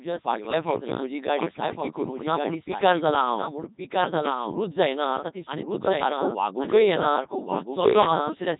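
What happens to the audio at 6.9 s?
At 6.9 s a doubled audio track is present, as it is throughout the clip. A second full-band copy of the speech trails the original by about one second, only a few decibels quieter, so two overlapping streams are heard at once. The copy has no reverberant tail or room colouring, which sets it apart from an echo. This likely comes from the signal being captured a second time through a slower path, or from an edit holding two misaligned copies.

The same moment also carries heavy Codec 2 vocoder damage, again present throughout. Instead of preserving the waveform, this low-rate digital-radio coder transmits only pitch, voicing, energy and a coarse spectral envelope, and the decoder rebuilds the voice from sine waves. The speech therefore sounds robotic and buzzy, with nothing above 3.8 kHz. The delayed copy overlapping the speech gets mangled, because the coder can model only one voice. 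The coder runs at its top rate of around 3.2 kbit/s.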